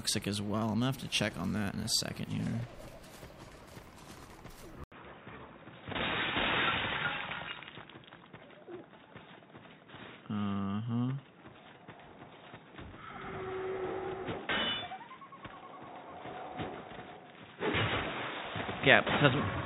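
At 4.84 s the sound drops out for 80 ms and returns dull and boxy, with nothing above 3.8 kHz and a new, quiet noise floor: likely an input switched to a poorer device. That gap and new noise, at unchanged loudness, rule out filtering.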